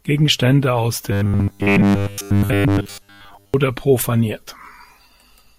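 Robotic sound from repeated short buffers runs from 1.12 to 3.54 s. Across this stretch the speech collapses into a rigid, metallic buzz at 100 Hz that still loosely tracks the words. The likely cause is audio arriving too seldom, so the playback keeps looping a tiny slice of the latest audio, about 10 ms, which fits that 100 Hz pitch, while most of the real speech in between is skipped.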